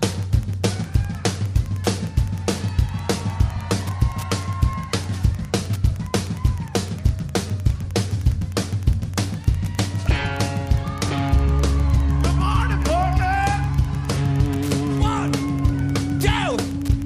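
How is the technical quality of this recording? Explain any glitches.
The recording is marred by one fault. Wi-Fi interference runs throughout: a nearby radio's beacon, every 102.4 ms, is rectified by the audio circuit into steady ticking about 30 dB below the sound. Its slow ten-per-second rate distinguishes it from the dense buzz of mobile-phone interference.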